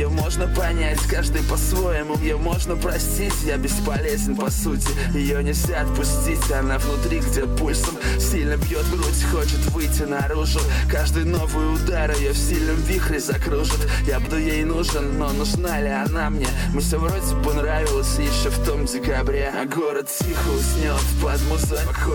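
The audio jumps forward at 2.21, 7.41, 14.24, 16.79 and 21.85 s, a sign of compressed frames skipped. Roughly 0.7, 0.15, 0.4, 0.15 and 0.3 s of material is lost, which fits whole 46.4 ms frames dropped or rejected by the decoder.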